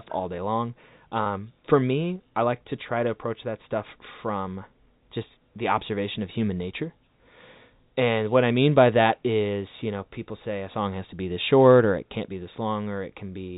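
At 1.24 to 1.26 s the speech briefly hangs on a slightly held, buzzy sound before carrying on, a packet loss with pitch repetition. About 20 ms of audio went missing, which fits a single lost packet, and the receiver filled the gap by repeating the last pitch period instead of leaving silence. The gap is short, so it comes across as a small, buzzy hold rather than a dropout. It is heard through the 4 kHz band limit of the G.711 telephone coding.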